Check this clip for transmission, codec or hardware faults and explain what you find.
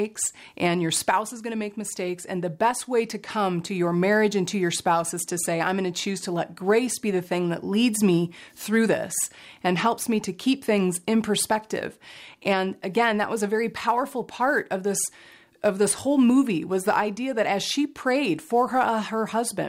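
There is one hardware fault, present throughout. Sample clock jitter: the converter's timing wanders by around 3 µs, mistiming samples on steep waveform slopes, leaving a hiss about 30 dB down that swells on loud, bright passages.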